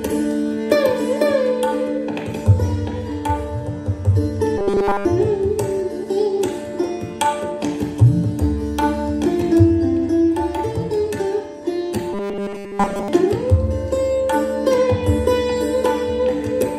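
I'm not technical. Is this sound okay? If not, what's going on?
No. From 4.58 to 5.05 s and again from 12.13 to 13.08 s, the sound turns into a flat, metallic 200 Hz buzz: robotic sound from repeated short buffers. Unlike silent dropouts, the gaps are filled by looping a tiny 5 ms slice, likely because the audio arrived too slowly.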